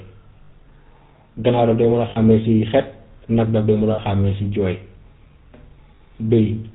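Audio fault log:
throughout, GSM full-rate codec: the speech is cut off above 4 kHz and has a buzzy, gravelly roughness that is plainly audible. The codec models the vocal tract and drives it with a coarse, regularly spaced pulse excitation, which fits a 13 kbps full-rate stream.
0.44–0.51 s, 2.10–2.17 s (after "daf dee mun a"), 3.92–3.99 s (after "nag daf dee mun"), 5.96–6.01 s, lost GSM frames: 60 ms gaps, with a 40 ms gap at the end, are filled by repeating the last good frame's settings. This holds the sound as a brief rough, metallic ring. The lengths fit three and two missing 20 ms frames.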